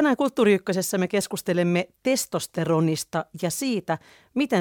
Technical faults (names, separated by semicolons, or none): none